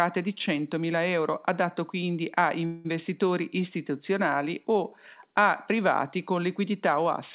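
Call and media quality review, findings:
2.66–2.87 s, after "euro adatto quindi a": last sound stretched into a fading buzz or hiss for 186 ms, then resumes where it stopped. Likely call audio freeze: jitter buffer ran empty, concealment filled the gap.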